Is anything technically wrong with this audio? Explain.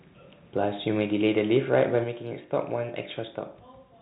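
Yes. From 1.01 to 1.83 s there is microphone overload: the input level was likely set too high, driving peaks about 4 dB past the converter's limit. A small fraction of samples have their tops sheared off, giving the loudest syllables a harsh, crackling edge. The microphone volume was also stepped down, likely by the call software reacting to that overload: at 1.02 s by about 2 dB and at 2.04 s by about 4 dB. Speech and background both drop abruptly in level at each step. Underneath, the G.711 telephone coding limits the band to 4 kHz.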